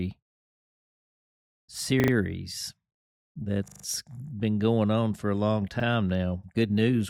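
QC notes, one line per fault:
2.00–2.12 s, 3.68–3.84 s, 5.80–5.84 s: repeated buffer. A short slice of sound replays three, four and one extra times, with a hard join at each repeat, heard as a stutter. The 40 ms spacing fits a 40 ms buffer replayed while new data was late. Playback then resumes without skipping ahead.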